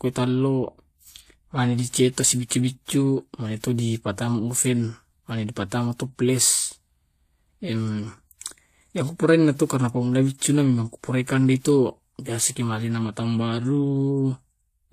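A speech clip showing transcoding between lossy codecs across its whole length. Artefacts from two coding stages are audible together: the artefacts of the first encode sit under a second layer of quantisation artefacts, and nothing remains above 14.9 kHz. The character points to a low-bitrate HE-AAC encode, around 24 kbit/s, that was likely re-encoded to WMA at about 96 kbit/s, which spent its bits preserving the earlier damage.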